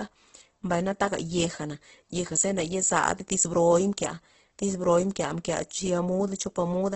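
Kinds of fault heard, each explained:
Opus compression: the speech sounds grainy and rough throughout, with noisy texture replacing clean detail and nothing above about 8.1 kHz. This fits likely heavy Opus coding in its music mode at around 12 kbps, where starved bands are refilled with noise or folded copies of lower bands.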